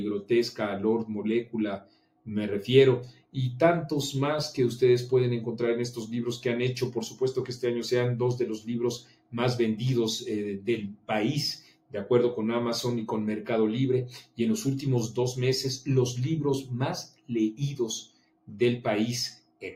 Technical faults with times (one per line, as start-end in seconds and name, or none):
0.00-19.76 noise suppressor applied to music or sounds
1.78-2.27 sound cut by the noise suppressor
3.11-3.36 sound cut by the noise suppressor
8.98-9.34 sound cut by the noise suppressor
10.94-11.09 sound cut by the noise suppressor
11.68-11.94 sound cut by the noise suppressor
17.07-17.31 sound cut by the noise suppressor
18.07-18.61 sound cut by the noise suppressor
19.39-19.62 sound cut by the noise suppressor